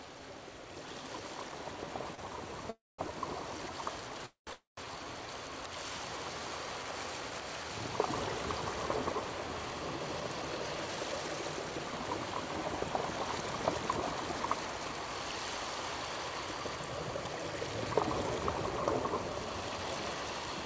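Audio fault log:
2.15–2.21 s: short stall from a late packet. The receiver held the last sound for about 29 ms until the delayed packet arrived, then resumed where it left off, so nothing is lost. On a spectrogram a brief smeared, flat stretch of repeated harmonics; on the waveform a short run of near-identical cycles.
2.28–5.27 s: jitter buffer slow-down. The receiver rebuilt its reserve by repeating single pitch periods and pieces of pauses, adding about 56 ms over three seconds, so the audio plays at 98% speed with unchanged pitch. On a spectrogram, harmonic bands are slightly stretched in time; the waveform shows duplicated periods.
2.70–3.01 s, 4.26–4.50 s, 4.53–4.80 s: call audio freeze. The sound trails off into a fading buzz or hiss and then silence for about 210 ms, 130 ms and 160 ms, before resuming from the same point. The likely cause is packets held up in transit that emptied the buffer, inserting gaps of 286 ms, 211 ms and 244 ms. 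On a spectrogram, a decaying smear followed by a blank column; on the waveform, a shrinking tail and then flat line.
9.95–11.93 s, 14.35–19.78 s: jitter buffer speed-up. An overfull buffer was drained by cutting short pitch-period pieces, about 0.3 s in each stretch, so the audio runs at 112% and then 104% speed at the same pitch, sounding hurried in the first stretch. Onsets crowd closer together on a spectrogram, with small splices in the waveform. Across the whole clip, nothing shows above 8 kHz, which fits a wideband call codec such as G.722.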